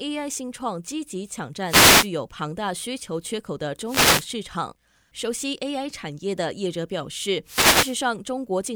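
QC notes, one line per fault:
1.66–2.09 s, 3.85–4.29 s and 7.44–7.98 s, wireless microphone noise hit: each is a brief swish of static, about half a second long, that rises over the speech and then clears. These are dropouts in the radio link of an analogue FM microphone. Reflected signals cancel the direct one and the received signal fades, so receiver noise rises and, in a deep fade, breaks into clicks that cover the voice.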